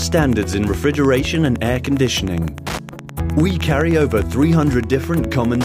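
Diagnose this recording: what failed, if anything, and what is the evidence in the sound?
Wi-Fi interference entered at the analogue wiring stage: a steady tick runs through the whole clip every 102.4 ms, around 20 dB below the sound. A nearby radio's beacon is being rectified by the circuit. On a spectrogram it appears as evenly spaced vertical broadband stripes.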